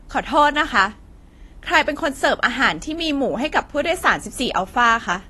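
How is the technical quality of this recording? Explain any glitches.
Quality is held back by plainly audible codec damage across the whole clip. Throughout, nothing sits above 12.1 kHz and the speech is dull and fizzy on sibilants, likely AAC compression starved near 32 kbps, cutting highs and coarsely quantising detail.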